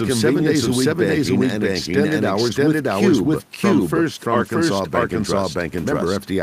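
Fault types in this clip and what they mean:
Doubled audio track: A second full-band copy of the speech runs through the whole clip, trailing the original by roughly 0.7 s at about the same level, so every syllable returns as a clean, dry repeat with no decay or room colouring. Because it is so loud and so late, it reads as a separate overlapping track rather than an echo. This most likely comes from the signal being captured twice through paths of different latency.
Lost packet rebuilt from error correction: Between 4.35 and 4.49 s the speech turns rougher and noisier but never drops out. About 80 ms of audio was lost in transit, which fits four separate packets. Each missing stretch was rebuilt from a low-bitrate duplicate carried inside the following packet, so the decoder filled the hole with a coarser, degraded version instead of leaving silence.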